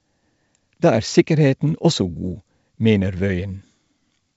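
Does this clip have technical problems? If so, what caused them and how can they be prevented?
No, nothing here needs fixing: the speech comes through G.722 wideband telephone coding at 64 kbit/s, which leaves at most a faint trace at that rate, so there's nothing to prevent.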